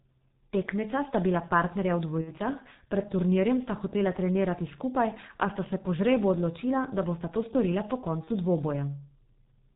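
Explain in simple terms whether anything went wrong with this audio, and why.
The whole recording has passed through the G.723.1 codec, an old internet-phone speech coder. It removes everything above 4 kHz and updates its model of the voice only every 30 ms, so the speech sounds heavily muffled and hoarse, with smeared consonants.

There is also VoIP packet loss concealed by the speech codec, at 2.21 to 2.32 s and at 8.24 to 8.31 s, just after "to storila po". Pieces of the stream went missing, about two frames' worth the first time and one the second. The decoder filled each gap by stretching the last sound into a fading buzzy tone or coloured noise, and the voice stays weak briefly afterward.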